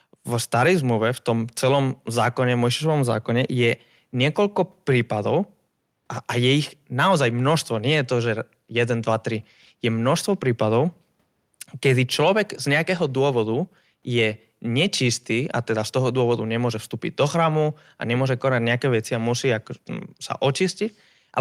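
No technical faults are audible anywhere in the recording.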